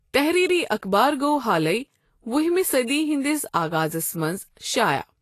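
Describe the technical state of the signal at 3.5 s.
The speech at 3.5 s is passing through what is likely Vorbis compression, present across the whole clip rather than at this moment alone. The encoder has starved the upper band, removing everything above 14.2 kHz and quantising the remaining treble so coarsely that its fine structure turns into noise of similar energy. The damage is plainly audible here as a grainy hiss and softened consonant attacks, which fits a low bitrate around 32 kbps.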